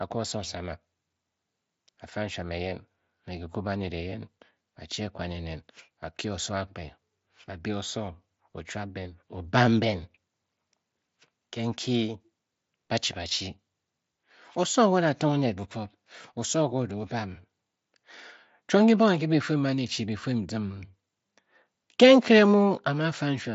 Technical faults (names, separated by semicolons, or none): none